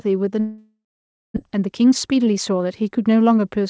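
From 0.40 to 1.38 s, a long network dropout is the likely cause: packets stopped arriving and the receiver filled the gap for about 0.96 s. The last sound is drawn out as a fading buzz or hiss before roughly 0.55 s of silence, and about 0.6 s of audio never returns. The delay shifts by around 300 ms.

From 1.48 to 3.58 s, a jitter buffer speed-up follows. The buffer holds more audio than it aims for and is draining it by cutting short pitch-period slices, roughly 200 ms in all. The speech runs at about 111% speed, hurried but unchanged in pitch, over a band with nothing above 8 kHz.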